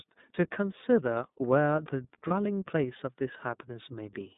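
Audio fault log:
Throughout: iLBC codec. The whole clip has the narrowband iLBC sound, with the band squeezed to roughly 150 Hz to 3.7 kHz, so there's no air or sibilance up top. The coding damage is easy to hear: the speech has a grainy, slightly synthetic edge because each 30 ms frame's excitation is coded on its own. The rough texture and 30 ms framing fit iLBC's 13.33 kbps mode.
2.27 to 2.32 s: lost iLBC frames. There's a short dropout of about 30 ms, consistent with one lost frame. The decoder fills it by repeating the last pitch cycle with some noise mixed in, so you hear a brief held, faintly buzzy vowel instead of a hard silence. Because iLBC frames don't depend on earlier ones, the speech snaps straight back to normal right after the gap.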